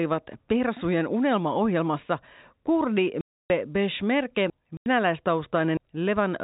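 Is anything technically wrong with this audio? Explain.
Yes. The speech has two gaps from packet loss filled with silence. The first runs from 3.21 to 3.5 s, just after "unelmaohjelmassa kurdi", lasting 290 ms. The second runs from 4.77 to 4.86 s, lasting 90 ms. Both lengths fit 10 ms packets. The receiver played silence for the missing ones. So the sound cuts out abruptly, with hard edges.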